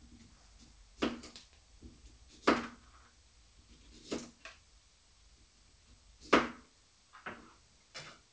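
No faults are audible in these everyday sounds, which pass through a call path whose band ends at 8 kHz, consistent with a G.722 wideband codec.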